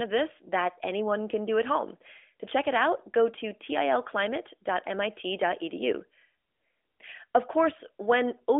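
Nothing technically wrong turns up in this bit of speech, so there's no fault to point to here.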